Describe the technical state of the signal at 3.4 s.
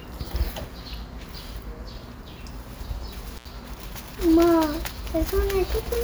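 At 3.4 s there is an intermittent contact fault, from 3.37 to 3.45 s. A loose plug or cable briefly breaks the connection for about 74 ms. The sound drops out, with crackle at each edge. Faint hiss remains during the gap.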